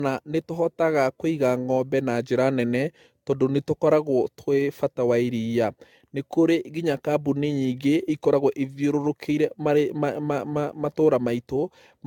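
From start to finish the speech sounds swirly, hollow and smeared, with soft consonant attacks. This is generation loss, likely from about seven successive AAC-LC encodes, fitting roughly 96 kbit/s. A spectrogram shows nothing above 17 kHz.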